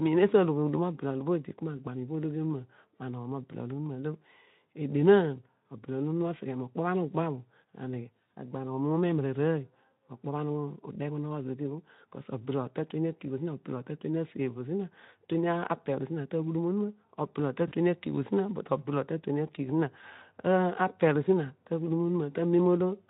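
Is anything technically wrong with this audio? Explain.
Yes. VoIP packet loss concealed by the speech codec occurs at 17.67 to 17.73 s: the decoder extrapolated its last pitch and filter across a 40 ms gap, giving a buzzy or noise-like, fading smear.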